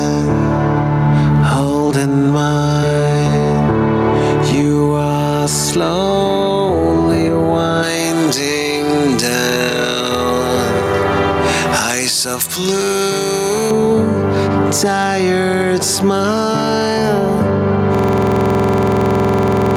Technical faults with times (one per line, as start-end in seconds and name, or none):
0.00-19.77 gain pumping
7.83-13.71 pre-emphasis left on
17.95-19.77 system hang loop